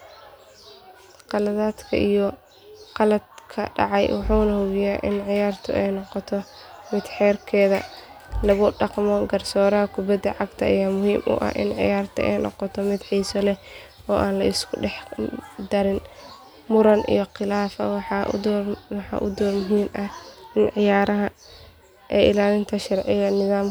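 No technical faults are audible.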